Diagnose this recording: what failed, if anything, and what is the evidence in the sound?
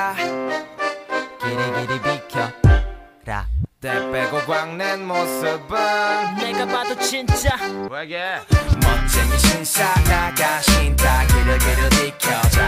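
The failure is at the codec stage: a corrupt frame decoded. From 6.39 to 6.42 s there is a short, harsh burst that does not belong to the surrounding audio, peaking loud at around -10 dBFS. It spans roughly two compressed frames. Damaged bits in those frames were still passed to the decoder, which applied wrong gains and misread spectral codes, placing energy at the wrong frequencies until clean frames resumed.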